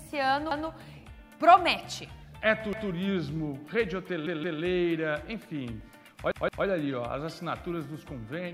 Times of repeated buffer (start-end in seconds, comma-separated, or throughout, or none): 0.51-0.68, 2.73-2.90, 4.27-4.61, 6.31-6.66